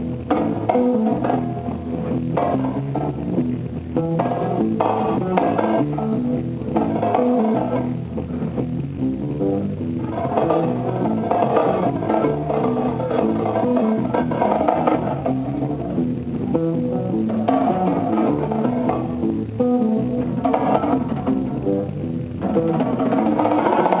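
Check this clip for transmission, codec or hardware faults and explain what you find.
Two related faults are present: clock drift between the two ends of the call, and the repeated timing corrections the receiver makes to cope with it.

Clock drift between sender and receiver runs through the whole clip. The sender's audio clock runs faster than the receiver's, by about five percent. Audio arrives faster than it is played out, so the jitter buffer keeps filling. The receiver has to discard material to avoid overflowing, and the timing never settles. Small timing irregularities recur throughout, at uneven intervals.

Repeated timing corrections appear from 0.03 to 0.99 s, with playback at 104% speed, and again from 2.81 to 23.36 s, at 106% speed. To stay in step with the faster sender, the receiver keeps cutting out short pieces. The cuts all go the same way but are unevenly spaced. If they come across at all, it is as small hiccups and a tempo that feels pushed and unsteady. 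The audio also carries the coding noise and the band limit of G.711 A-law, with nothing above 4 kHz, which fits a 64 kbps call codec.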